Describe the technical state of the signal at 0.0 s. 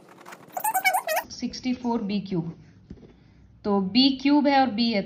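At 0.0 s the signal has a wrong sample rate fault, running until 1.24 s. The audio plays three times too fast and about 19 semitones high, which fits 16 kHz material played back at 48 kHz with no conversion, so speed and pitch rise together.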